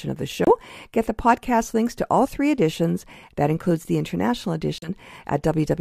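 A speech recording with two brief dropouts. At 0.45 s the sound cuts to about 25 ms of silence. At 4.78 s a second gap of about 40 ms follows. Each time the audio then resumes. These are Bluetooth stalls, likely caused by radio interference delaying packets. The headphones' buffer runs empty, so playback halts. It restarts only once the resent data arrives.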